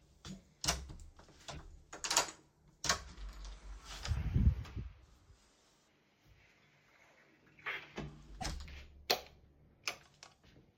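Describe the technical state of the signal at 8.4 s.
Around 8.4 s there is damaged data in a compressed stream. Between 8.37 and 8.46 s, part of the encoded data arrives corrupted, with bytes lost, zeroed or overwritten. The decoder cannot read those frames correctly, loses its frame alignment and searches ahead for the next valid header before normal decoding resumes. In the sound this is a short burst of about 80 ms, heard as a brief chirp, squawk or blip cutting into the audio.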